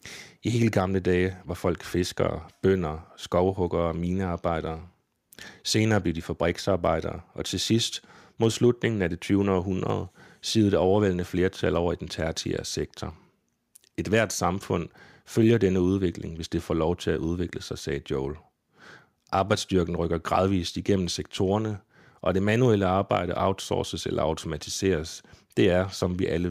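Speech recording; no technical faults can be heard.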